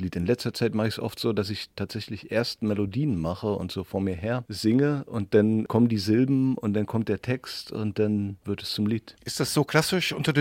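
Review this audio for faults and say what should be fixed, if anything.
There are three tiny skips, at 1.71, 5.70 and 9.69 s. Each time a sliver of sound, just a few milliseconds, vanishes and the two sides butt straight together with no gap. They're spaced exactly 4 s apart, so this is likely audio missing between chunks: something processing in 4-second blocks drops a bit at each handover. To fix it, have the recorder or processor overlap or buffer its chunk boundaries so nothing is lost at the seams.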